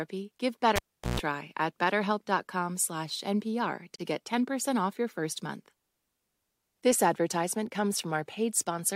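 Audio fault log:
0.76–1.20 s, cable pulled and plugged in: a pop as the live lead comes out, then close to silence for about 390 ms while nothing's connected. Near the end, the plug's tip touches on its own and you get roughly 140 ms of 60 Hz mains buzz, since the tip picks up hum before the shield makes contact. Once it seats fully, a second pop, and the speech is back.
3.96 s, gap at a join of encoded pieces: a hole of about 39 ms drops straight into the speech, with edges that the codec has smeared. It sounds like two separately encoded chunks butted together untrimmed, so the encoder's start-up delay and the padded last frame both stayed in as dead air. After the dropout the speech carries straight on from where it cut off, with nothing lost.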